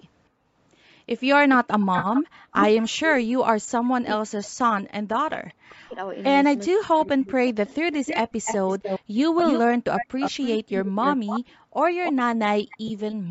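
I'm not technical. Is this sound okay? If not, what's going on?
No. Three kinds of fault are audible in this speech.

Echo leak: a delayed copy of the voice returns on top of the original. The likely cause is a loudspeaker on the other end of a call whose echo canceller let part of its microphone pickup through and sent it back. From 1.53 to 3.13 s the copy trails by about 420 ms and is nearly as loud as the voice. A brief, very faint scrap follows at 6.16 to 6.23 s. From 7.47 to 11.4 s the copy returns, now about 292 ms behind and again fairly strong. Shorter, weaker pieces with the same 292 ms lag appear at 12.04 to 12.13 s and 12.69 to 13.15 s.

AAC frame loss with concealment: the audio was sent in small compressed chunks, and a few of them never arrived. The decoder filled each gap by guessing from the last good chunk, so you hear a short smeared, noisy or phasey patch. The longest gap is 40 ms at about 1.99 s, and a 20 ms gap sits at about 12.88 to 12.91 s. 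A single 10 ms gap falls at 9.40 s.

Speech suppressed in double talk: the voice drops sharply, sometimes almost to silence, in pieces from 3.41 to 5.97 s and again from 6.7 to 7.42 s. This is likely the echo canceller reacting to both sides talking at once. It could not tell the talker apart from the loudspeaker echo, so it turned everything down. Roughly two seconds are affected in the first stretch and about half a second in the second.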